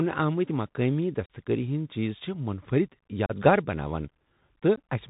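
The whole speech clip has the narrowband sound of a Bluetooth CVSD headset codec, at 64 kbps. Everything above 4 kHz is gone, s sounds come out scratchy, loud bright bits distort as the one-bit delta steps can't keep up, and there's a grainy hiss underneath.

Then there's some unconcealed Bluetooth headset packet loss: short holes with hard edges at 1.26 to 1.28 s, at 3.26 to 3.32 s just after "چھِ منفرد", and at 4.76 s. Roughly 40, 34 and 15 ms of audio drop out, which points to bursts of around ten, ten and four packets. Nothing fills the gaps, and on this CVSD link the speech comes back quieter for a moment.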